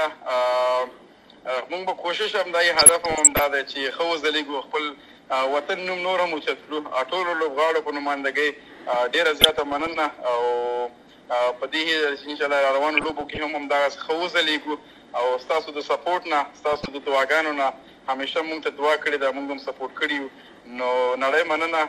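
Throughout, the audio is dull with gurgling, granular distortion, likely from MP2 compression with upper sub-bands switched off, which fits a rate near 80 kbps. DAB burbling appears at 2.75–3.44, 9.41–9.97, 12.97–13.40 and 16.69–16.88 s: residual bit errors make sub-bands jump, giving short noise blips and level jumps in single sub-bands.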